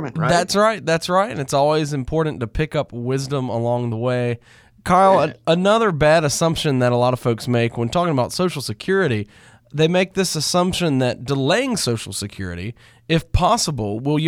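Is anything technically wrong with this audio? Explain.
No, the speech signal shows no technical faults anywhere in the clip.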